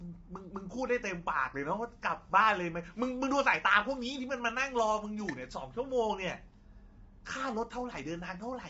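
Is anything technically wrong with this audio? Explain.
Yes. All the way through, the speech has a rough, grainy quality, with a hiss filling the gaps between the harmonics and nothing at all above about 7.7 kHz. That's likely low-delay AAC compression, AAC-ELD, the kind video calls run on. Its very short frames can't separate the voice's harmonics cleanly, so bits get spread thin, and here the damage is plainly audible, consistent with a low rate of around 24 kbps.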